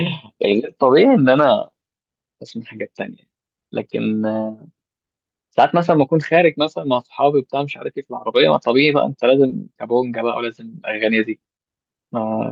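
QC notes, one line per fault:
9.47–9.51 s, short concealed packet loss: a packet arrived too late, so the decoder stretched the preceding sound over the gap, about 20 ms of it, then blended back into the real audio. You hear a quick smear or wobble.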